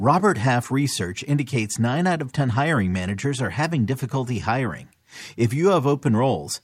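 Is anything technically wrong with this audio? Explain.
No, nothing technically wrong stands out here; the speech comes through without any audible problems.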